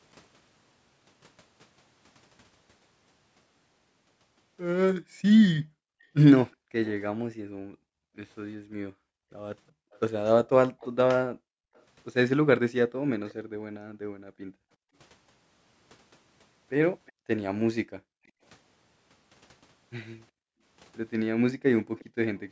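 From 5.01 to 14.95 s the background is gated by the echo canceller. While the far end plays, the room sound is pushed down by as much as about 40 dB for roughly half of that span. On a waveform the noise floor collapses to near silence, and a spectrogram shows blank gaps that refill when the canceller releases.

Faint delayed copies of the speech follow, trailing the original by 361 ms, at 6.51 to 6.91 s and 9.91 to 13.34 s, both at about 25 dB below the speech. They are likely an echo leak, with the far side's loudspeaker sound getting past its echo canceller. A spectrogram shows a weak, offset ghost of the speech's harmonic pattern.

A brief scrap at 17.06 s is about 35 dB down. Gating returns from 17.15 to 18.41 s and from 20.32 to 22.16 s, each with short dips. A last echo at about 30 dB below the speech runs from 21.87 to 22.4 s.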